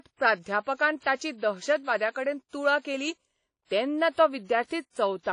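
WMA compression runs through the whole of this speech clip: the audio is likely a low-bitrate Windows Media Audio encode, with plainly audible damage consistent with roughly 32 kbps. Nothing survives above about 10.1 kHz, so the top end is dull and closed in. The transform codec spreads its quantisation noise across long blocks and drops weak spectral detail, leaving a washy, smeared texture with a hiss that rises and falls along with the signal.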